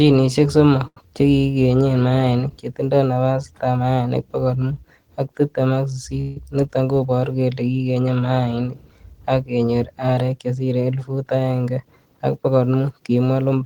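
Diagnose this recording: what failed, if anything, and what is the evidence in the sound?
A late packet emptied the jitter buffer, causing a short stall from a late packet: between 0.87 and 1.11 s the speech holds a sound about 89 ms too long, then resumes.

A call audio freeze, likely from packets delayed in the network, leaves the last sound continuing as a fading buzz or hiss for 160 ms from 6.20 to 6.37 s, between "mut ak tibtem ak" and "niton koboru kele kigenye".

A jitter buffer speed-up trims pitch periods to cut surplus delay: after "arek chesire", 11.08 to 12.48 s runs at 108% speed, hurried but same pitch, shedding about 150 ms.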